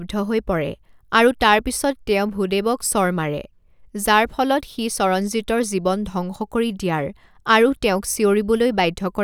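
No technical faults are audible.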